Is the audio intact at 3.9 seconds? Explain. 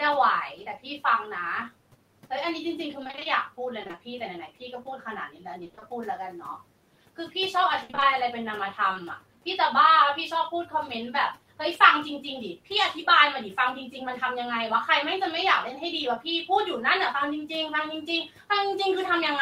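No. From 3.83 to 3.99 s there is repeated packet loss, giving a robotic sound. Four short gaps, none longer than 20 ms, are each patched by extending the preceding sound, so half that stretch is filler. Unlike a single dropout, the holes recur rapidly, producing choppy stutter.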